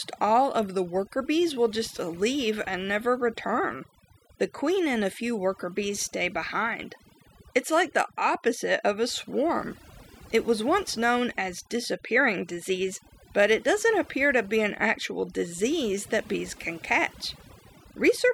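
Overdone noise removal runs throughout the speech. Frequency bands near the noise estimate are pushed far down. The background breaks into twinkling, warbling specks.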